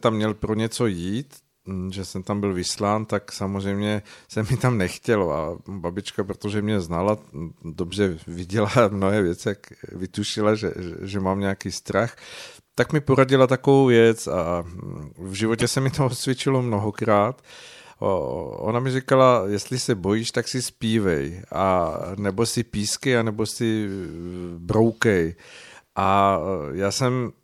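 At 15.59 to 15.63 s the speech is broken by a short glitch of about 40 ms, the sign of damaged data in the compressed stream. The decoder misreads corrupted frames and resyncs at the next header.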